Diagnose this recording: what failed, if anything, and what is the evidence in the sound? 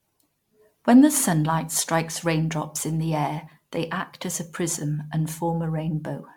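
Codec stage, throughout the speech: swirly, hollow smearing with blurred consonant attacks and content stopping near 19.9 kHz. This is likely generation loss from roughly ten MP3 passes at a rate near 128 kbit/s, each requantising on a shifted frame grid. A single encode wouldn't smear this badly.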